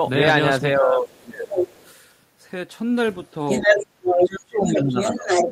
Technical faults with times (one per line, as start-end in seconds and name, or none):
0.76-1.48 speech suppressed in double talk
1.09-1.89 other side's voice leaking through
3.06-5.52 other side's voice leaking through
4.00-5.52 speech suppressed in double talk